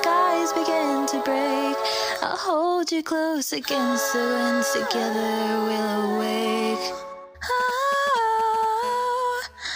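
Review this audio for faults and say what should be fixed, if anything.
GSM signalling bursts appear from 7.6 to 8.65 s: a galloping dit-dit-dit of short buzzes at about 217 Hz, sitting roughly 15 dB below the wanted sound. A nearby 2G phone was exchanging brief control transmissions with the network, and the audio circuit rectified each radio pulse into an audible click train. On a spectrogram this shows as short vertical clusters with a 217 Hz harmonic comb. The waveform carries small spiky packets in irregular groups. Shielded cabling and RF-filtered inputs, with phones kept well away, would prevent it.

GSM phone buzz follows from 8.83 to 9.71 s as a hard, raspy, continuous buzz at 217 Hz, about 23 dB below the signal and unrelated to it. The phone has moved into a call and now transmits a burst every 4.6 ms without pause, so the rectified pulses form a steady tone rich in harmonics. 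A spectrogram shows an unbroken ladder of horizontal lines at multiples of 217 Hz, and the waveform has a regular pulse-like ripple underneath the sound. Banning active phones near the rig and using RF-suppressed equipment prevents this.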